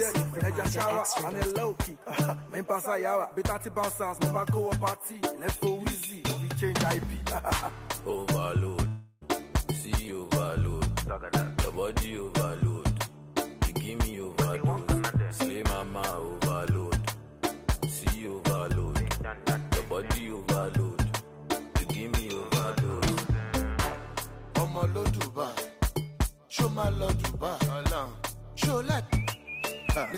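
At 8.87 s the sound gives way to a fading buzzy smear until about 9.23 s, then picks up again with roughly a third of a second simply gone. That's likely a long network dropout, with the receiver padding the gap instead of going silent.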